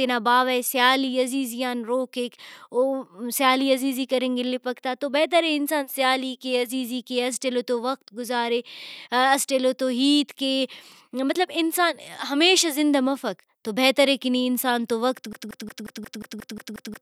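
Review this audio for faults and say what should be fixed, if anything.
Right after "نی انسان تو وقت", at 15.33 s, the speech turns into a broken-record loop: a 0.18 s fragment repeats nine times back to back until the clip ends at 17.02 s, and whatever should have followed is gone. It's likely a stalled player or encoder that kept resending its last buffer. To prevent it, have the pipeline flag a stall and output silence or stop instead of recycling stale audio.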